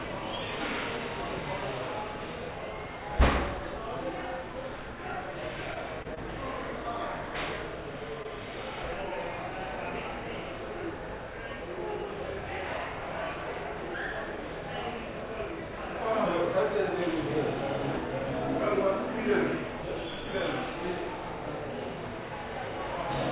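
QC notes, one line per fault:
2.51, 17.97 and 19.82 s, dropped buffer (overrun): At each of these points the sound jumps ahead. About a tenth of a second goes missing and the two sides butt together with no silence between them. The likely cause is a capture buffer that was overwritten before the program read it. On the waveform there is a step discontinuity at the join. The spectrogram shows a thin full-height vertical line, cut off at the 4 kHz ceiling of the G.711 path, and the texture on either side changes abruptly.
5.74–5.82, 6.14–6.19 and 8.23–8.27 s, short stall from a late packet: Here the last sound is held a little too long, with a slight buzz or dip. In each case a packet arrived late, the jitter buffer ran dry and the receiver stretched what it already had. The fills last 16, 25 and 19 ms, and nothing is lost. In the first stall, 8 ms was later trimmed to catch up. On the spectrogram the partials run flat and frozen for a short stretch. 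The waveform shows a few near-identical repeated cycles.
6.03–6.06 s, short concealed packet loss: About 20 ms of audio never arrived. The receiver patched 17 ms of it by extrapolating the preceding sound and then crossfading back into the real signal. This is heard as a brief smear or wobble. On the spectrogram the fine detail blurs into a smooth, slightly noisy patch. In the waveform the envelope softens and loses its transient edges across those few hundredths of a second.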